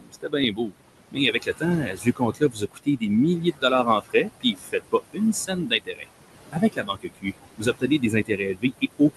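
Noise suppressor artifacts run through the whole clip. The suppressor pulls the room noise, which sits about 11 dB below the speech, down by about 20 dB wherever it judges a band to be steady noise. Because it decides frame by frame, the background sinks in the pauses and swells back under the speech.

Speech cut by the noise suppressor occurs from 0.0 to 0.74 s, from 1.12 to 6.08 s, and from 6.52 s to the end. In these stretches the suppressor mistakes parts of the speech for noise and turns them down with the background, by as much as about 22 dB (about 21 dB in the last one). Roughly half a second of the first span and around two seconds of the second are affected. Soft consonants and word endings sound swallowed or faint.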